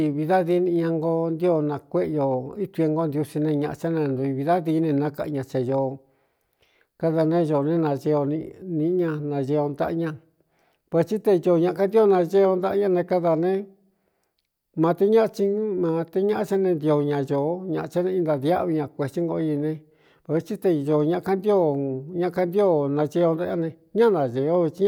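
No technical faults detected.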